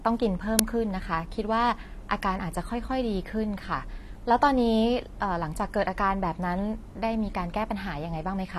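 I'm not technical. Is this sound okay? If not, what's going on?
No. At 0.59 s an uninitialised buffer was played before the sound was written into it, so leftover memory came out as a brief, loud crack. Throughout, the speech was squeezed hard by heavy compression, likely AAC compression, which throws away detail, so it sounds dull and smeared, with nothing above about 13 kHz.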